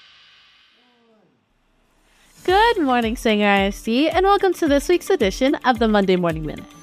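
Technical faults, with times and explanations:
No technical faults detected in this audio.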